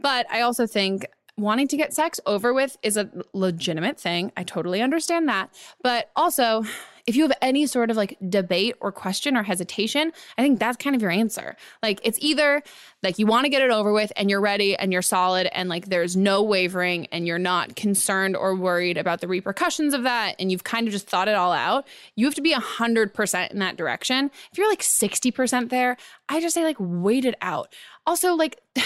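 No technical faults can be heard anywhere in the speech. Nothing in the recording calls for a timestamp or a repair.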